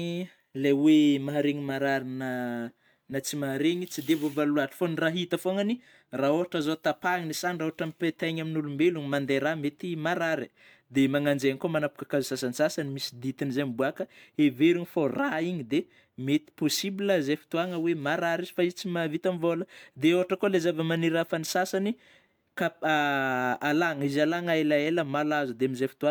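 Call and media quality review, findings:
No audible faults found.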